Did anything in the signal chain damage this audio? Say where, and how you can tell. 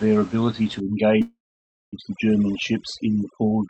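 Yes. In call processing, overdone noise removal sets in from 0.8 s to the end. The suppressor is set far too hard, cutting individual frequency bands whenever they sit near its noise estimate. Quiet parts of the speech vanish with them, leaving near-silence with twinkling specks.

A call audio freeze runs from 1.21 to 1.95 s. The last sound is drawn out into a fading buzz or hiss, then about 0.56 s of silence. Speech resumes exactly where it stopped, nothing lost but about 0.71 s late. The likely cause is delayed packets emptying the jitter buffer.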